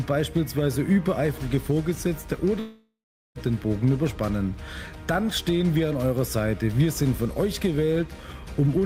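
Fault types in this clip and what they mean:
Long network dropout: the stream likely stopped delivering audio for about three quarters of a second, leaving the receiver to fill the gap on its own. From 2.59 s the last sound is stretched into a buzz or hiss that fades away, followed by about 400 ms of silence. The audio resumes at 3.38 s, and the 760 ms of material that should have played in between is missing rather than delayed.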